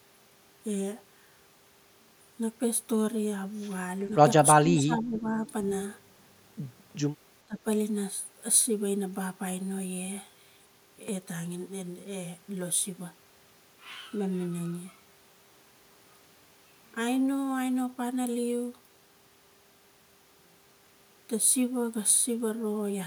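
It's a speech recording with two spots where the far end of a call seems to be fighting the talker. From 4.63 to 5.44 s the voice sinks for most of that stretch, by roughly 15 dB at its deepest, and at 7.46 to 7.58 s there's a shorter, deeper dip of about 20 dB. That's speech suppressed in double talk: both dips are likely an echo canceller that couldn't tell the talker apart from loudspeaker echo while both sides spoke, so it pulled the whole signal down. Right after the first dip, at 5.46 to 5.51 s, there's a brief, very faint scrap of the voice coming back about 436 ms late, sitting around 35 dB below the speech. That's echo leak, likely from a speakerphone whose canceller let a bit of its own playback slip back down the line.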